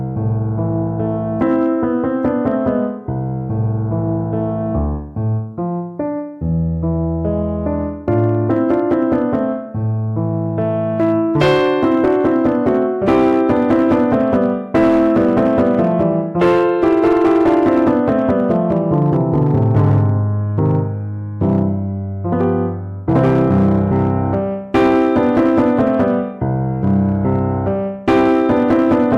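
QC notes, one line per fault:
throughout: hard clipping. The signal is driven about 8 dB past what a stage can pass, so peaks are sliced flat, affecting roughly 3 percent of samples. Those flattened tops add high harmonics, heard as crackle and a harsh edge on loud moments.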